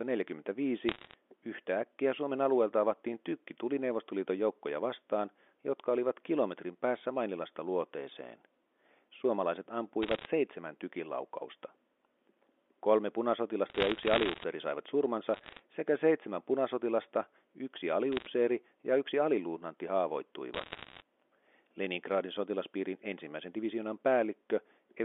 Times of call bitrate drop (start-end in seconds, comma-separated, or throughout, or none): none